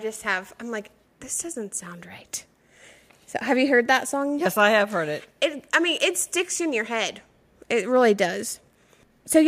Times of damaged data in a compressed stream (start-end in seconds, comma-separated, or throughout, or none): none